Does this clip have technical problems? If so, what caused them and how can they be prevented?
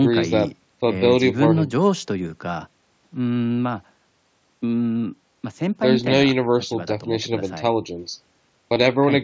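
Yes, concealed Bluetooth headset packet loss at 3.35 s and 8.74 s: about 15 ms each, patched with repeated recent waveform, seen as copied cycles and a faint seam. Keeping the headset near the phone, away from other 2.4 GHz traffic, prevents it.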